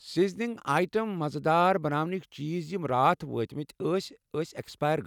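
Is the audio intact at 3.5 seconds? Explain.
Yes, at 3.5 seconds the speech plays through intact, with no dropout, click, distortion or other fault to be heard at that moment.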